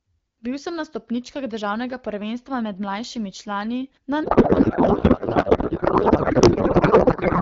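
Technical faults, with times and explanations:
4.23 to 7.42 s, codec payload misread: after "med mlajšimi člani na", the clean AMR-WB speech turns to garbled noise and warble. This fits octet-aligned frames unpacked as bandwidth-efficient, which shifts every field, and it lasts to the end.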